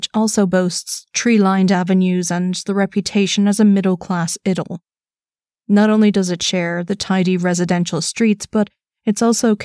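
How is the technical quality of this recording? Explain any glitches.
No glitches can be heard anywhere in the recording.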